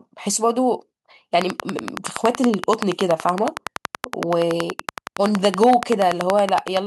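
Speech carries a train of clicks from 1.42 s to 6.78 s: some fifty same-shaped pulses at a steady 10.6 per second, roughly 20 dB above the speech and ticking through pauses. Their even spacing separates them from random crackle; likely interference from nearby equipment.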